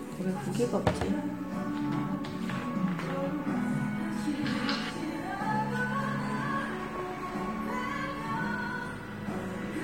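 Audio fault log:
No faults can be heard in this recording of sounds. There is nothing to enter in the log.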